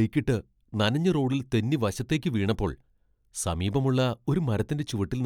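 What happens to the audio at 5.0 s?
At 5.0 s the speech continues cleanly, with no dropout, click, distortion or other audible fault at that point.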